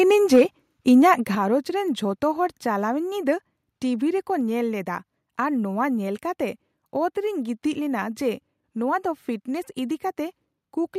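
From 0.33 to 0.42 s the loudest syllables turn harsh and crackly. The peaks push about 3 dB past the converter's limit. Their tops are flattened, and around a tenth of the samples in that stretch sit pinned at the limit. This is microphone overload. The likely cause is an input gain set too high, so the converter ran out of headroom on the strongest sounds.

At 0.36 s, in the middle of that distorted burst, the level falls by about 2 dB in one jump. At 1.35 s it falls again, by about 6 dB. Both the speech and the background sink together, with no fade. This is the microphone volume being stepped down. It was likely triggered by the clipping, with the call software reacting by cutting the device's input level in discrete steps.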